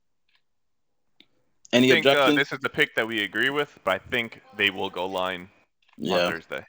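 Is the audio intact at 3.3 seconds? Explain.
No. At 3.3 seconds the speech carries the resampler restarted on every block fault, which runs through the whole clip. The 16 kHz to 48 kHz conversion was done on 10 ms blocks in isolation, so at every block boundary the converter lacked the true neighbouring samples and left a small error. Those errors repeat at 100 Hz, so they merge into a steady buzz at that rate, audible only while speech is present.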